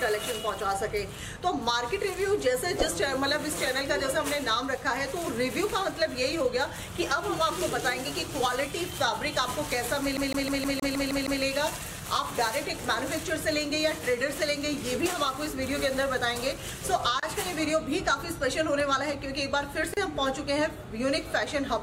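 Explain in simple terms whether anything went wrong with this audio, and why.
From 10.17 to 11.42 s the CD is stuck on one turn: a scratch keeps throwing the laser back, so the same 157 ms snippet repeats eight times with a tiny mute at each jump.

At 17.20 s and 19.94 s there is a gap at a join of encoded pieces: silences of 31 ms and 33 ms where separately encoded sections were joined without trimming their padding.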